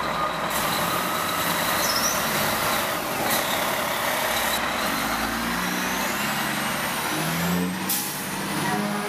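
From 0.50 to 4.58 s the audio shows pre-emphasis left on: the treble boost was never undone by the matching de-emphasis. The top end sits about 10 dB high at 10 kHz relative to 1 kHz, consistent with a 50 µs FM curve, making the sound thin, bright and sibilant.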